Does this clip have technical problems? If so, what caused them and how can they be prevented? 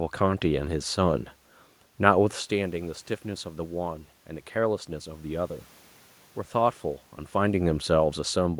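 No, nothing here points to a technical problem: the background noise is just the room the mic was in, and the level shifts around 2 and 7 seconds are simply the talker moving nearer to or farther from the microphone.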